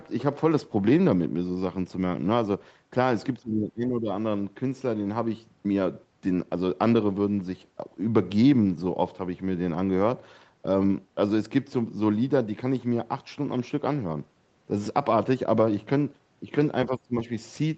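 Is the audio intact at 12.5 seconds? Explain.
Yes, the speech at 12.5 seconds is intact, with no dropout, glitch or other fault at that moment.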